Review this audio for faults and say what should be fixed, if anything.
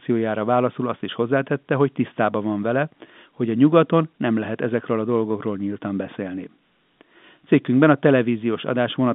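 Nothing here needs fixing: it's just speech carried over an ordinary G.711 telephone line, with the narrow band of about 150 Hz to 3.6 kHz you'd expect from that kind of call.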